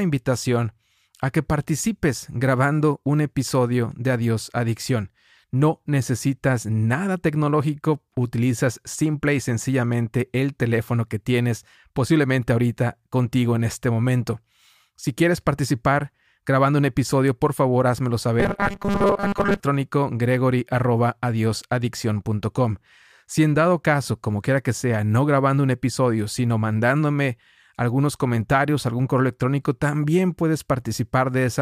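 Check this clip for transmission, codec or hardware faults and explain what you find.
One fault: from 18.4 to 19.6 s, right after "episodio por favor házmelo", the speech turns into a rigid, metallic buzz pinned at 200 Hz, still loosely tracking the syllables. This is robotic sound from repeated short buffers. The likely cause is audio arriving too late, with the player looping its last fragment to fill the gap while most of the real signal in that stretch is dropped. A 200 Hz buzz fits a repeating chunk of about 5 ms.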